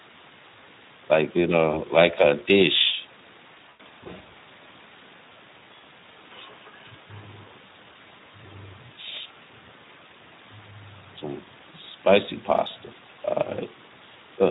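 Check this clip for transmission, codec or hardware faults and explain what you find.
Two faults are present: Speex codec damage across the whole clip, and VoIP packet loss concealed by the speech codec in two places.

The Speex codec damage runs throughout. The speech sounds plainly hoarse and noisy, which fits a bitrate around 11 kbps. At that rate the CELP coder has few bits for the excitation.

VoIP packet loss concealed by the speech codec occurs at 1.71 to 1.81 s, consistent with one lost 20 ms frame. A longer patch at 3.69 to 3.86 s suggests scattered losses with one run near 100 ms. The decoder extrapolated from its last pitch and filter with fading gain, and the voice stays weak briefly afterwards.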